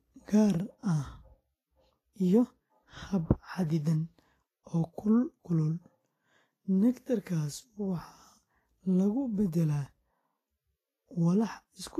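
Throughout the speech, the encoding was likely squeezed by low-quality Vorbis compression, with a density of damage that fits a bitrate near 29 kbps. The encoder kept a smooth outline of the spectrum with quantised detail on top, and rounded the upper bands so coarsely that their detail turned into noise of similar strength. Nothing remains above 14.2 kHz. The result is plainly audible: a hissy, grainy treble, roughened tone and softened, smeared consonant onsets.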